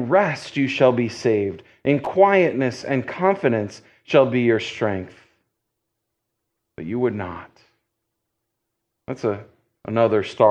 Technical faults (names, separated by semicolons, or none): loose connector crackle